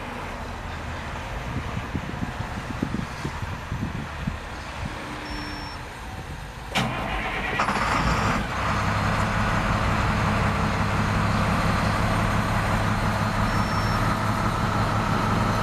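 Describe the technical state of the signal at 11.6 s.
At 11.6 s the signal is intact, with no dropout, distortion or other fault audible at that moment.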